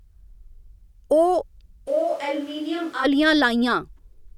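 From 1.89 s to 3.03 s the speech abruptly turns roomy and hollow, loses bass, falls by about 10 dB and sits over room noise roughly 25 dB below it, then snaps back. This is likely a switch to a distant microphone after the close one dropped out.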